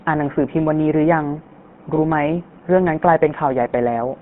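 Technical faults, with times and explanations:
Throughout, GSM full-rate codec: the speech has a plainly audible buzzy, gravelly roughness from modelling the vocal tract and driving it with sparse, regularly spaced pulses, which fits a 13 kbps coder, and the band runs only from 150 Hz to 3.5 kHz.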